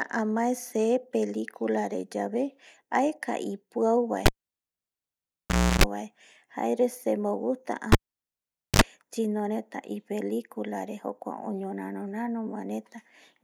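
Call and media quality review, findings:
Cable pulled and plugged in, twice. 4.26–5.84 s after "re yave aeka ipiau": pop, about 1.5 s dropout, 0.32 s of 60 Hz hum as the plug tip makes contact, then pop. 7.92–8.82 s after "bae jare semo gusta": about 0.84 s dropout, 54 ms of 50 Hz buzz. Suspect input cable or jack.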